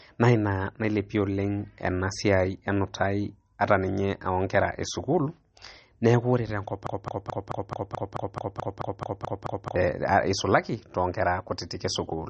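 Throughout, the speech sounds watery and swirly, with nothing above 8.3 kHz; the spectrogram shows a flat ceiling and flickering holes, likely MP3 compression at a low bitrate around 32 kbps. From 6.87 to 9.76 s, a broken-record loop repeats one 0.22 s fragment back to back, likely from a stalled stream; the waveform shows identical repeating blocks, and the speech meant for that span is lost.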